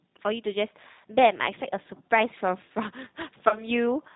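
The speech passes through a G.729 codec throughout. Its sound points to roughly 8 kbit/s, where each 10 ms frame is rebuilt from a vocal tract filter, a pitch predictor and a few pulses. The result is plainly rough and synthetic, with nothing above 4 kHz.

From 3.49 to 3.64 s, VoIP packet loss concealed by the speech codec is heard. About 20 ms of audio went missing, which fits a single lost packet. The decoder stretched its last pitch and filter into a fading sound, and the speech stays weakened until about 3.64 s.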